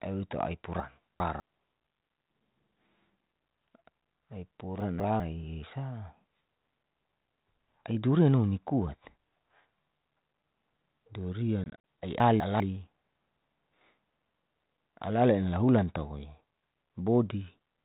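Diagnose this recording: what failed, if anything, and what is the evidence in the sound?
Chunks out of order, at the buffer stage: 200 ms blocks play late at 0.8–1.4 s, 4.8–5.2 s and 12.2–12.6 s. Each leaves a jumbled moment, with vertical spectrogram edges at the joins.

Packet loss on an ADPCM call, in the network path of this 32 kbit/s G.726 call: at 11.64–11.77 s, 100 ms vanishes as flat silent gaps of up to 40 ms, which points to about five lost packets. Sound returns with brief distortion while the decoder's predictor resynchronises.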